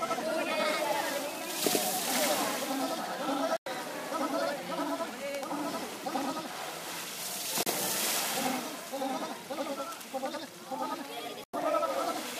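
The audio carries a channel delay (doubling) from start to finish. One channel runs about 85 ms behind the other, which fits a 4096-sample buffer. When the two are summed to mono, every onset is followed by a second copy at the same level. What sets it apart from room reverberation or a tape echo is that there is one clean repeat at a fixed gap and no decaying tail. Separately, there are three digital broadcast dropouts. The sound mutes abruptly from 3.57 to 3.67 s, again from 7.63 to 7.67 s, and from 11.44 to 11.54 s. The 0.1 s holes point to about three lost frames of roughly 32 ms each, and the shorter one to a single frame. These are true silences where the receiver stopped outputting until valid data returned. Nothing is smeared or warbled, as packet-loss concealment would produce, and the material during each gap is simply gone.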